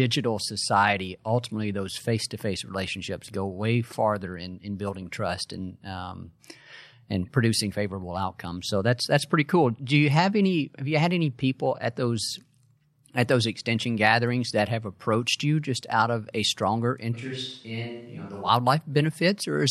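Right after "out of a stronger", at 17.15 s, the speech suddenly goes roomy and hollow, loses its low end and drops about 10 dB, with room noise sitting around 35 dB below it. That's likely a switch to a distant microphone, and it snaps back at 18.48 s.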